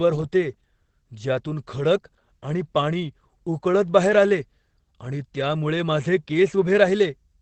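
Opus voice compression runs throughout: the speech stops at 8.5 kHz, and coarse SILK excitation coding leaves it muffled and hoarse, pointing to about 12 kbps.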